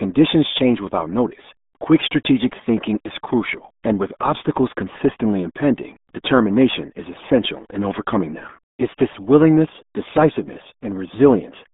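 Throughout the clip the speech has been squeezed through the RealAudio 14.4 codec, a dial-up-era coder whose heavy damage fits a rate of about 8 kbit/s. Only a narrow band from 200 Hz to 3.6 kHz survives, with nothing above 3.7 kHz, so the voice sounds muffled and gargly.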